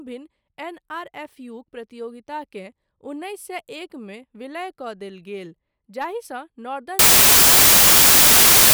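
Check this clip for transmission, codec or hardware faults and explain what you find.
One fault is present. From 6.99 s to the end, samples are built from the wrong bytes. Misordered or misaligned bytes promote the fast-changing low bits, turning the audio into loud, harsh broadband noise.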